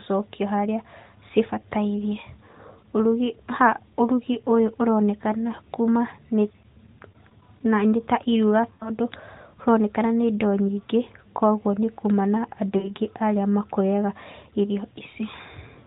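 Lost AMR speech frames at 1.00 s, at 8.74 s after "ta iruga", and at 12.78 s between "nĩ kuma na andũ" and "arĩa makũrĩaga irio". For about 40 to 60 ms the decoder stretches the last sound with fading gain, giving a smeared warble rather than a hard gap or click.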